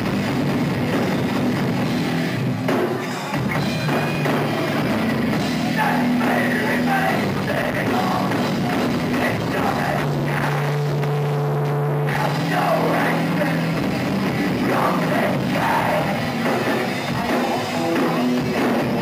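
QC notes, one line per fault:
4.15–4.20 s, overlapping chunks: about 50 ms of audio plays twice where one 6-second chunk begins before the previous ends, causing a brief stutter.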